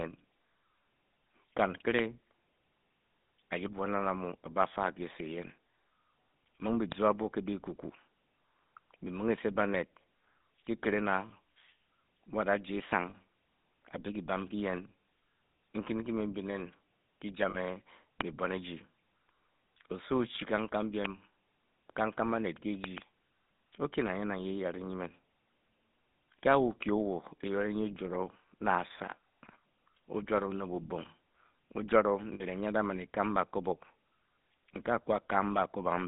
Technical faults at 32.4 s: GSM full-rate codec; lost GSM frames

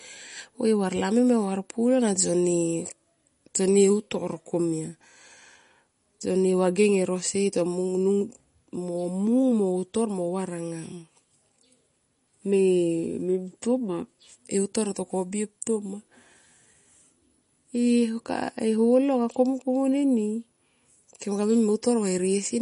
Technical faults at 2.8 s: MP3 compression

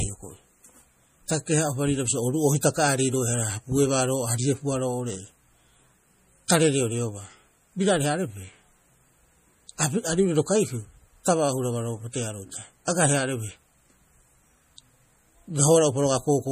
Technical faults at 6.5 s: MP3 compression; pre-echo

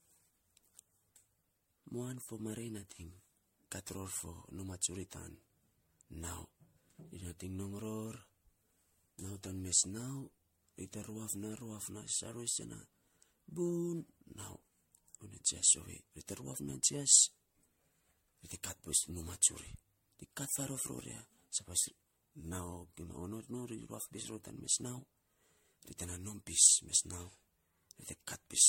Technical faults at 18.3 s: generation loss

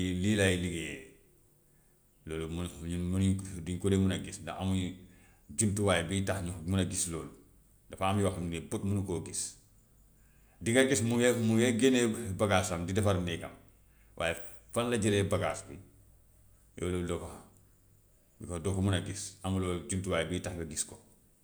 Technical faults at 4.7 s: none

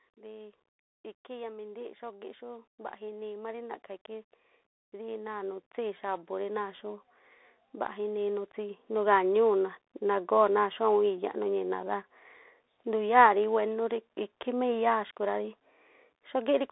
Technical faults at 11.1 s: Bluetooth CVSD headset codec

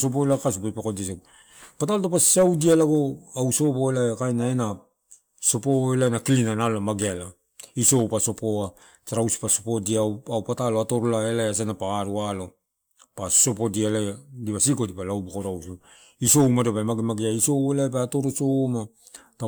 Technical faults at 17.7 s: none

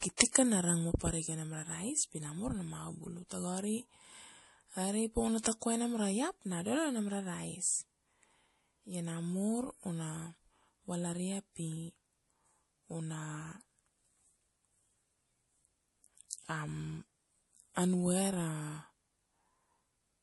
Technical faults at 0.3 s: MP3 compression; pre-echo

